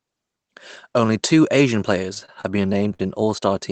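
From about 2.14 to 3.32 s the speech hits repeated stalls (stutter): packets arrive late, the jitter buffer keeps running dry, and the receiver stretches the last sound to cover fifteen short gaps, the longest 55 ms. Nothing drops out, but the line drags and hiccups.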